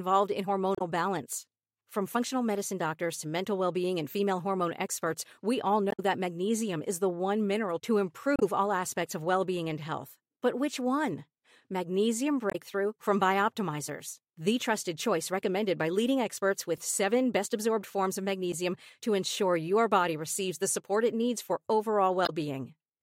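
Damaged data in a compressed stream breaks the speech five times: the decoder hits corrupted frames, loses sync and skips ahead to the next readable frame header. Each break is short, at 0.75–0.81 s, 5.89–6.00 s (between "hormone experts we all" and "that magnesium is"), 8.36–8.43 s (between "one mineral to" and "all aspects of well"), 12.50–12.56 s and 22.25–22.30 s.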